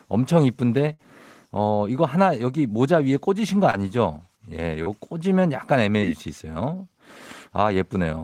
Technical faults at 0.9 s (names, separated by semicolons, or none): burst of packet loss